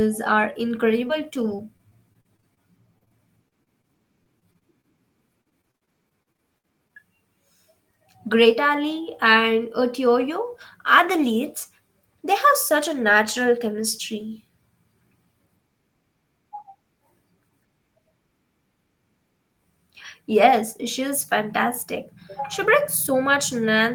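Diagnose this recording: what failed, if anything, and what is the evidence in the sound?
From 1.07 s to 6.93 s the speech turns choppy and robotic, where short pieces keep dropping out, about thirty times in that stretch, none longer than 53 ms. This is repeated packet loss on the network path. Each missing slice was papered over by stretching the preceding sound, roughly 13% of the span, while other bits of missing audio, around 70 ms in all, were rebuilt only approximately.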